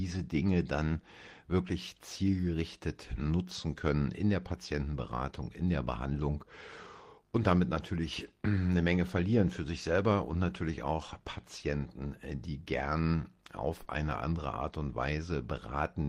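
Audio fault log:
13.83–13.87 s, short concealed packet loss: between "äh die gern" and "eine andere", about 20 ms of speech arrived too late to decode, and the receiver bridged roughly 16 ms by extending the preceding sound before fading back into real audio, leaving a brief smear.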